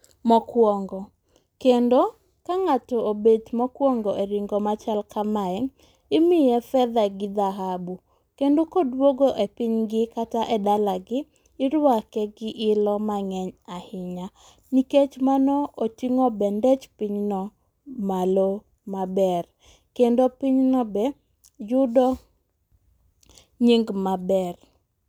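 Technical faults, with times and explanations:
No technical faults can be heard in this speech.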